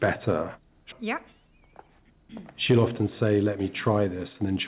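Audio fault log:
0.92–0.94 s, skip ahead: playback leaps forward with no gap or fill, so around 0.7 s of audio never arrives and the sound on either side is butted straight together. That stretch was dropped, on the way or by the jitter buffer when it overflowed, while later audio was already queued. A spectrogram shows an abrupt vertical seam where harmonics and energy contours jump discontinuously; the waveform shows a sudden change in envelope with no silent gap, often with a small step or click at the join.
1.02–4.51 s, jitter buffer speed-up: after the jump, the buffer still held more audio than its target, so it trimmed short slices of one or a few pitch periods over and over, shedding about a fifth of a second in total. The sound runs at roughly 106% speed with pitch unchanged, giving a faintly hurried, compressed rhythm. On a spectrogram, harmonic spacing stays the same while events arrive sooner; the waveform shows periodic cycles quietly missing, seen as slightly tighter timing across the stretch, all within a band that stops at 4 kHz from the G.711 A-law call codec.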